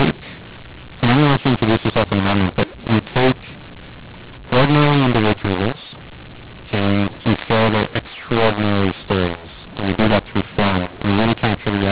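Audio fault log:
throughout, mu-law and A-law mixed up: the telephone audio was coded with the mu-law curve of G.711 but decoded as A-law, so each 8-bit code is mapped back to the wrong amplitude. Some levels come out too large and others too small, so the speech turns harsh and gritty. The lowest codes no longer land near zero, which lifts quiet moments above silence and fills the pauses with noise. The band still stops at 4 kHz, as G.711 requires.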